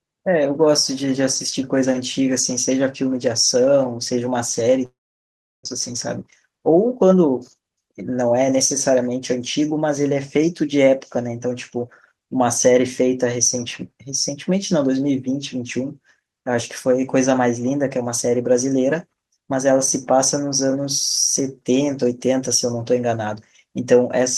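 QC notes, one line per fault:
4.85–5.67 s, long network dropout: the speech breaks off and the receiver keeps extending the last sound as a fading buzzy hiss, which thins within about a tenth of a second to near silence for roughly 0.7 s. The likely cause is a stall in packet arrival. About 0.6 s of speech is lost, and the speech resumes further on rather than where it stopped. The whole gap lasts about 0.8 s.
5.93–8.22 s, jitter buffer speed-up: the buffer holds roughly a fifth of a second more than it wants. To shed that excess, the receiver repeatedly cuts out short pitch-period-sized pieces. This makes the speech run at about 108% of normal speed without any change in pitch, so this stretch sounds slightly hurried until the backlog clears.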